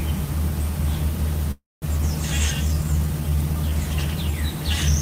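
A call audio freeze runs from 1.51 to 1.85 s. The sound stops moving forward and the last moment is stretched into a fading buzz or hiss that drops to about 200 ms of silence. This is likely packets held up in transit, draining the jitter buffer so the receiver has to improvise. When audio resumes it picks up exactly where it halted, so nothing is lost, but roughly 0.3 s of gap now sits in the timeline.

A skip ahead follows at 1.98 to 2.02 s. Playback lurches forward with only a tiny join of about 7 ms, and roughly 150 ms of sound never arrives. A chunk was discarded while newer audio was already queued, either on the way or by the jitter buffer when it overflowed. The material on either side of the jump is butted together almost directly, so the event cuts abruptly rather than pausing.

A jitter buffer slow-down stretches from 2.68 to 3.71 s. Over that second the sound plays at about 87% speed but keeps its pitch, because the receiver is repeating individual pitch periods and slivers of pauses to rebuild its reserve, adding 146 ms in total. 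The effect is a drawn-out, slightly sluggish texture, with sustained parts lengthened.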